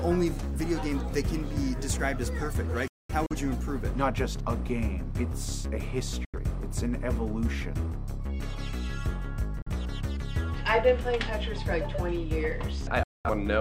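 Digital broadcast dropouts at 2.88–3.36 s (about 256 ms muted in scattered holes), 6.25 s, 9.62 s and 13.03–13.30 s: the receiver muted corrupted frames with 3 ms fades, leaving sharp-edged silent gaps across all frequencies on the spectrogram.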